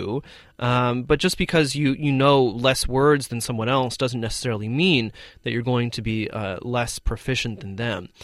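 Nothing in this bit of speech trips any alarm; there's no technical fault to point to anywhere in it.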